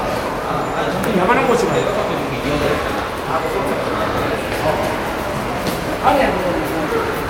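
No technical faults can be heard anywhere in this audio.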